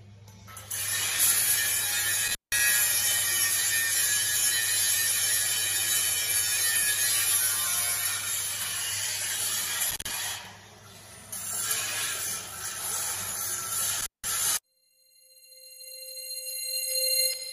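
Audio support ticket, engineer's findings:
Intermittent contact at 2.27–2.59 s, 9.91–10.11 s and 14.00–14.24 s. Audio drops for about 173, 96 and 174 ms with edge crackle and faint hiss. Loose cable or plug momentarily opening the signal path.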